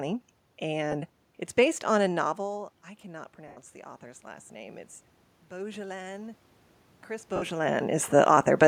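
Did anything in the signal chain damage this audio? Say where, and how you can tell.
Yes. Lost LE Audio frames at the wireless link: gaps at 0.92–0.94 s, 3.48–3.58 s and 7.36–7.43 s, about 10, 90 and 60 ms, fitting 10 ms LC3 frames. The decoder refills each gap with the last spectrum and random signs, giving a noisy smear. Unlike a plain dropout, it is not silent, and the 90 ms loss fades as it goes.

Automatic gain rising in call processing: from 2.39 to 4.83 s the level climbs by about 4 dB, with voice and room noise swelling together. Around 2 s the input falls by about 18 dB as the talker moves away. A talker returning would lift only the voice. Here the noise rises in step over more than two seconds, which marks the gain control.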